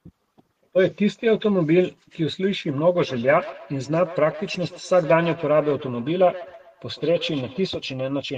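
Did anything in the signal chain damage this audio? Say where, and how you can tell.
Yes, there's feedback echo between two devices from 2.97 to 7.7 s. The speech repeats roughly every 150 ms, about 16 dB down, as one device's playback loops into the other's microphone, beyond its echo canceller.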